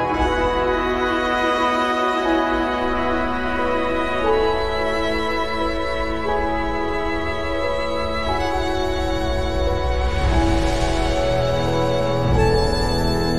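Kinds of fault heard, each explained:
DC step: The zero line of the waveform jumps suddenly at 2.83 s, as if an offset had been switched into the signal path or a converter had recalibrated. The shift is about -29 dBFS in size. It produces a single low thump at that moment. The offset then holds to the end, with no step back and no decay. The sound itself carries on unchanged through and after the jump.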